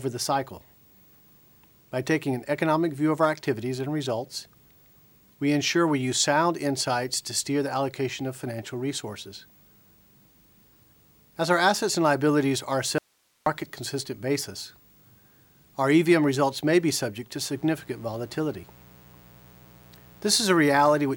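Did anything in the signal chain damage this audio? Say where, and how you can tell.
Yes, two faults.

An audio dropout to a faint residue runs from 12.98 to 13.46 s: the signal vanishes abruptly for 480 ms and only hiss remains, about 45 dB below the normal level, before the sound snaps back. The path stayed live, so the break was likely upstream in the driver, buffer or transport. On a waveform the envelope collapses to a thin strip of noise with vertical edges. A spectrogram shows a clean-cut gap filled with faint broadband grain.

Mains buzz enters at 17.51 s and continues to the end at 21.16 s. It sits about 30 dB below the signal and has a steady, raspy 60 Hz character. This points to the analogue wiring stage, through a ground or shielding fault or a nearby dimmer or rectifier. That kind of source injects sharp spikes twice per cycle. A spectrogram shows a comb of horizontal lines at multiples of 60 Hz reaching into several kHz. 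Zoomed in, the waveform carries a spiky pattern repeating 120 times a second.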